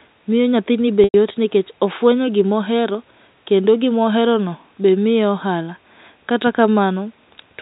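At 1.04 s, packet loss with pitch repetition bridges a gap of about 100 ms, which fits five lost packets. The decoder repeats the last pitch period, which sounds like a held, buzzy tone. It fades toward silence and the speech returns by 1.14 s with a short cross-fade.

From 1.91 s to the end, a switching supply whistle sits under the speech. A power supply is cycling in an audible burst mode or beating with another supply. The result is a thin high whistle, about 30 dB below the speech, drifting between 9.36 and 9.52 kHz.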